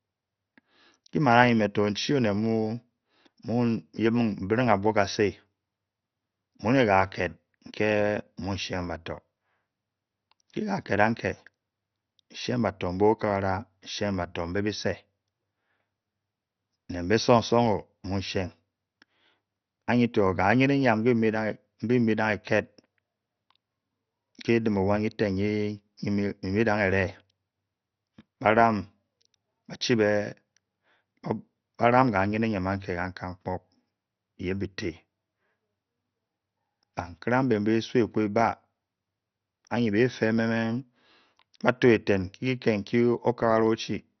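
Throughout, the speech has nothing above 6.2 kHz and a gurgling, granular texture, likely MP2 compression starved of bits, consistent with roughly 48 kbps, switching off upper sub-bands.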